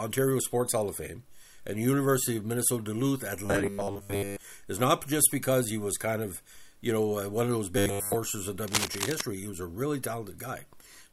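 From 3.46 to 4.45 s, and again from 7.78 to 8.18 s, the sound turns into a rigid, metallic buzz fixed at 100 Hz. This is robotic sound from repeated short buffers, likely caused by audio arriving too late and a 10 ms chunk being replayed in place of most of the real signal.

From 8.68 to 9.22 s, dense, uneven scratching rides over the sound only a little below its level. This is cable scratch noise, likely from a worn cable or connector whose contact resistance jumped rapidly as it moved.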